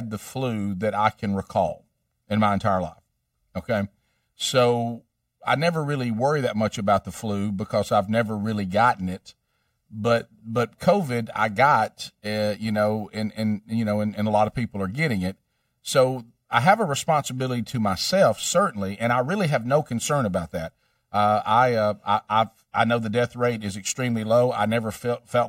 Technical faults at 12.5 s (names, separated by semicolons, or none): channel delay (comb filtering)